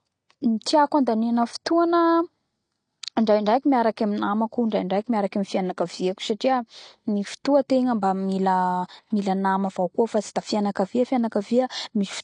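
A speech recording with plainly audible AAC compression damage from start to finish: the sound is dull and smeared, nothing passes above 9.8 kHz, and sibilants turn fizzy. On a spectrogram this shows as a hard ceiling. The likely cause is AAC-LC at a low bitrate, consistent with about 32 kbps.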